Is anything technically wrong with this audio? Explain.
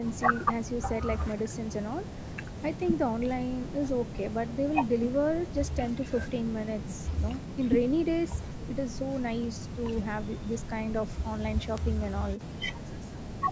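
Yes. A bit error spike at 11.78 s: a flipped bit pushes two consecutive samples off by a power of two before they snap back, producing one sharp, broadband tick.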